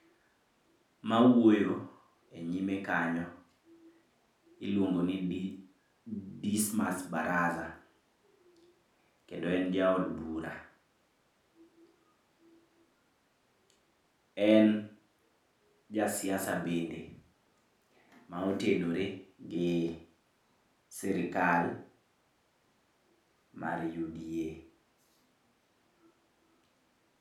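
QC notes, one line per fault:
No audible faults anywhere in this recording.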